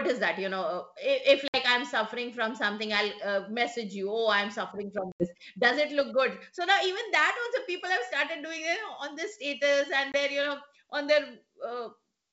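Packet loss on an ADPCM call hits this speech at 1.48–1.58 s, 5.12–5.33 s (after "oh i'm suffering from") and 10.12–10.15 s, dropping 60, 80 and 20 ms of G.722 audio as hard-edged silences. The decoder's predictor and step size then lose sync, so speech resumes slightly distorted before settling.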